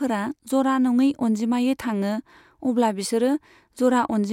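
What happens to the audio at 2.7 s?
Nothing goes wrong at 2.7 s; the audio carries straight through that moment without any dropout, click or distortion.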